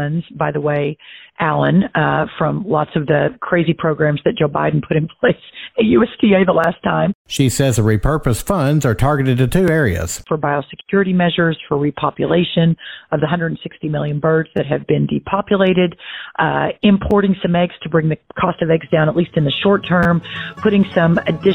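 Brief clicks or buzzy stutters occur at 6.64, 9.68, 14.57–14.59, 17.11 and 20.03–20.06 s, typical of a repeated buffer: a tiny piece replays, consistent with a 10 ms buffer.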